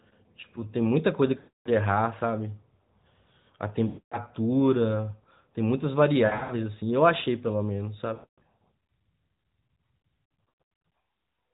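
Lost AMR speech frames occur at 1.38–1.69, 3.88–4.18, 8.14–8.42 and 10.50–10.58 s, plus a scattered cluster at 6.26–6.53 s. Failed frames make the decoder repeat stale pitch and vocal-tract settings with falling gain. Unlike a hard dropout, the sound stretches and fades over the narrowband AMR codec.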